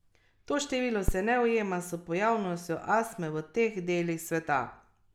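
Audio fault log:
1.08–1.15 s, phantom power thump. A deep thump peaks at about -12 dBFS before "ne ujema s pojavnostjo". A switched supply's step hit the input capacitors.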